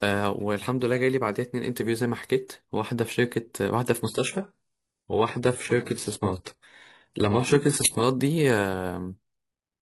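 Speech clip, and from 4.04 s to 8.04 s you get an adaptive stream at a lower bitrate. The quality drops suddenly with no gap, and the top end dies above 11.4 kHz. That points to a switch from around 96 kbit/s AAC to roughly 12 kbit/s HE-AAC, then back.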